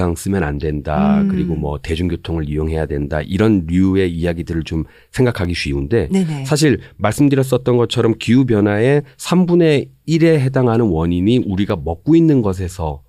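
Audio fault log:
5.45 s and 11.70 s, block of digital silence: twice the speech drops to silence for about 2.7 ms, which fits a 128-sample buffer left unfilled when the output was due. With no fade, the signal jumps to zero and back, so each gap is heard as a short tick. On a waveform it shows as a flat line at zero. On a spectrogram it appears as a thin vertical stripe of broadband energy from the two hard edges.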